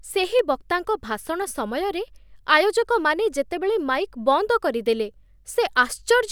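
At 0.39 s, just before "ବକ୍ତାଙ୍କ ଭାଷଣ ସମୟରେ ଆୟୋଜକମାନେ", and again at 1.42 s, between "ସେହି ବକ୍ତାଙ୍କ ଭାଷଣ" and "ସମୟରେ", there's a sharp single click, likely dropped samples. A handful of samples go missing, so the waveform jumps abruptly, far too briefly to lose any sound.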